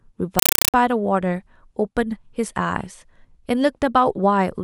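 A compressed stream played as audio fault runs from 0.39 to 0.74 s. An AC-3 stream, at a rate that fits 256 kbps, reaches the output undecoded and is treated as samples. Its 5.33 ms bursts of noise, each followed by silent padding, repeat 31.25 times a second. The result is harsh, loud chattering static replacing the speech.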